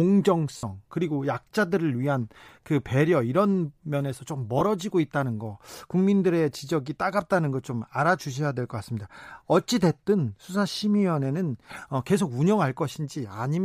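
At 0.57 to 0.63 s and again at 4.59 to 4.62 s the speech is hit by lost LE Audio frames. The 60 ms gap fits six 10 ms frames, the 20 ms gap two. The decoder refills each gap from the last good spectrum with scrambled phase, so harmonics blur into a brief noisy smear. On a spectrogram the harmonic lines dissolve into diffuse texture. The waveform loses its periodic shape. The light grain likely comes from LC3 compression.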